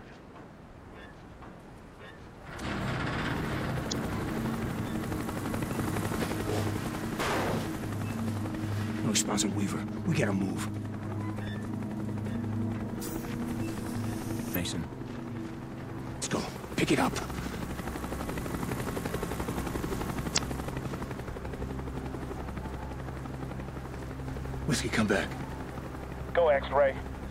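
Four brief disruptions break the audio, each about 40 ms long: at 3.88 to 3.93 s, 14.51 to 14.56 s, 16.19 to 16.23 s, and 20.34 to 20.38 s. These are damaged data in a compressed stream. Bytes in the encoded file were lost, overwritten or mixed with foreign data, so the decoder misread or discarded the affected frames and had to hunt for the next valid frame header before it could resume clean playback.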